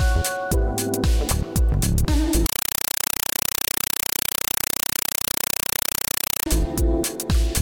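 From 2.46 to 6.46 s, a compressed stream played as audio replaces the sound: undecoded Dolby Digital data reaches the output as samples. Each 5.33 ms noise burst is followed by silent padding, 31.25 times a second, so it chatters rhythmically, unlike steady hiss.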